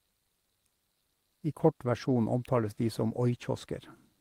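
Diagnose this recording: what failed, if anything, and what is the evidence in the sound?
Nothing failed: the speech has no audible fault at any stage of the chain.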